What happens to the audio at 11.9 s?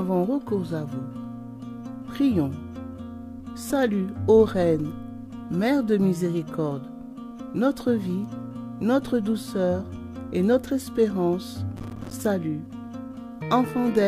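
At 11.9 s you're right in the middle of a burst of processor overload crackle, running from about 11.77 to 12.13 s. The processor couldn't keep up with its small audio buffers, which sound like they're around 5 ms each, and it missed something like thirty deadlines over that stretch. Each miss drops a tiny slice of silence with hard edges into the signal, so together they come across as a gritty, tearing crackle over the sound until the load eases.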